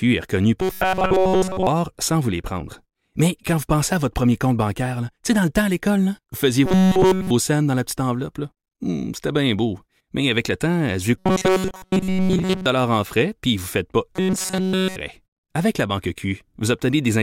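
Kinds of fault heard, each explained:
Robotic sound from repeated short buffers: new audio likely arrived too late, so playback kept looping a slice of about 5.3 ms instead of the skipped material, which fits the fixed 188 Hz buzz at 0.62–1.67 s (after "est reconnue"), 6.66–7.31 s, 11.18–12.66 s and 14.16–14.96 s (after "vous ne faites pas"). Nearly everything in each stretch is repeated, so the speech becomes a rigid metallic drone that only loosely follows the words.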